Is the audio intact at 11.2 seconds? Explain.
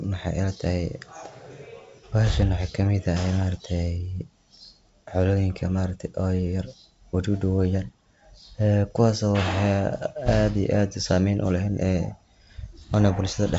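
Yes, the audio is intact at 11.2 seconds, with nothing there beyond the faint upper-band hiss of its 64 kbit/s G.722 wideband telephone coding.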